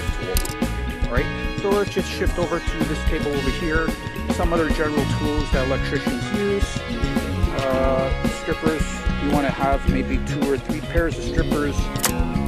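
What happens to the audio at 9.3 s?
At 9.30 s there is most likely a dropped buffer (overrun): the program failed to collect a block of samples before the hardware wrote new data over it, so roughly 10 ms of audio was lost. There is no gap of silence. The audio on either side of the missing piece is butted straight together, so the sound jumps forward abruptly at that point.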